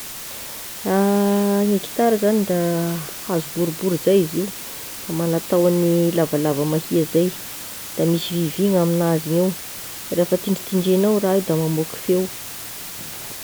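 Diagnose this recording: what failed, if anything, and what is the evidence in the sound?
The failure is in sample-format conversion: low bit depth with dither. A constant, even hiss runs under the speech for the whole clip, sitting only about 15 dB below it, yet the speech itself carries no crunch or grainy distortion. That pattern fits a reduction to about 5 bits with dither added before rounding. The dither randomises the rounding error, so what would have been distortion tied to the signal becomes steady broadband white noise instead.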